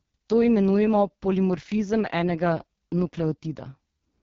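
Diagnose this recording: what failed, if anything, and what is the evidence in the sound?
The codec stage failed. Throughout the speech, the sound is rough and raspy, and nothing reaches above 7.4 kHz. These are the marks of the AMR wideband (HD Voice) codec. A pulse-driven vocal tract model starved of bits produces the heavy harshness, which fits the lowest 6.6 kbit/s mode.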